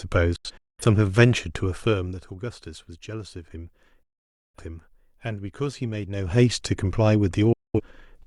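At 0.36 to 0.83 s the speech cuts out in several short holes, at 4.03 to 4.59 s it drops out for about half a second, and at 7.53 to 7.81 s it vanishes again, each cut almost instant. This is digital broadcast dropout: the receiver muted until valid frames returned.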